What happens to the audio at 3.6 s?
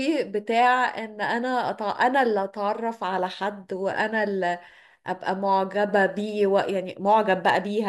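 Nothing goes wrong at 3.6 s; the speech there plays through intact, with no dropout, click or distortion.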